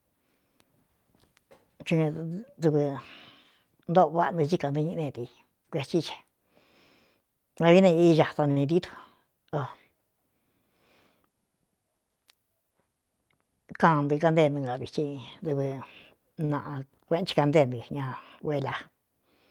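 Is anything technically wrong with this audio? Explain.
Yes. At 8.51 to 8.58 s and again at 16.45 to 16.51 s the speech briefly hangs, with a sound held too long and a faint buzz. These are short stalls from a late packet. The jitter buffer ran dry, so the receiver stretched the last sound, by 50 ms and then 40 ms, until the packet arrived. Nothing is lost.

From 12.74 to 13.03 s the speech sounds hurried but keeps its pitch, running at about 115% speed. This is a jitter buffer speed-up. After delayed audio piled up, the receiver trimmed short pitch-period slices, around 50 ms in total, to reduce the delay.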